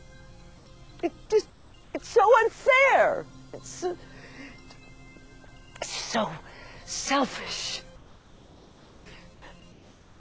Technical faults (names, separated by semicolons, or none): comfort noise in place of the background